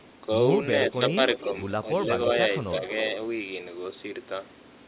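At 0.86 to 0.92 s, 1.35 to 1.5 s and 2.85 to 2.93 s, brief delayed copies of the speech come back about 313 ms behind the original. This is echo leak, most likely from the far end's echo canceller failing to fully remove the loudspeaker sound its microphone picked up. The scraps are short, fading from roughly 10 dB below the speech to about 15 dB, then about 25 dB, and they sit inside the same narrow telephone band as the rest of the audio.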